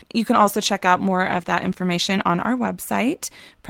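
From 0.37 s to the end, the sound becomes coarse and dull. This is a call bitrate drop. The connection's bandwidth estimate fell, so the encoder coded with far fewer bits. The roughness fits a fall from about 48 to 16 kbps, with the thinnest stretch lasting about 1.4 s.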